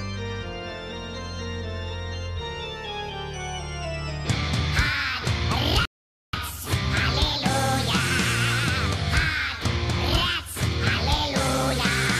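At 5.85 s the audio drops into silence and stays there until 6.33 s, which is a rebuffering stall. The player simply ran out of downloaded audio and had to wait for more to arrive before carrying on. When it picks up again, it continues from exactly the point where it cut out, so nothing goes missing. You just get a dead gap of about 480 ms added to the running time.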